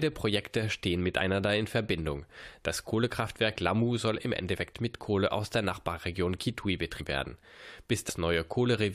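The speech jumps forward abruptly at 4.55, 6.99 and 8.08 s, losing roughly 50, 200 and 100 ms of audio. These are compressed frames skipped: whole blocks of coded audio, apparently about 23 ms each, were never played, so the sound resumes further on.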